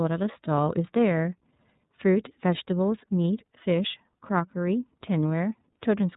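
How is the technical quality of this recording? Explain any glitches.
The recording is noticeably degraded by narrowband codec coding that runs through the whole speech clip. iLBC codec damage is present throughout: each 30 ms frame is coded on its own, which fits the 13.33 kbps mode, and nothing above 4 kHz survives. The speech stays intelligible but sounds muffled, slightly rough and synthetic, with plainly audible coding grain.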